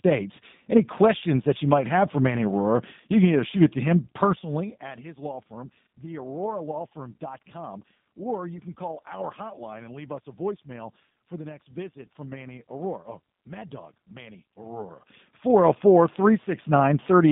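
From start to end, the speech carries plainly audible G.729 codec damage. The sound points to an 8 kbit/s voice codec that rebuilds each frame from a filter and a few pulses. It sounds rough and synthetic. The band runs from 150 Hz to 3.6 kHz. The fader-style level changes come through smoothly.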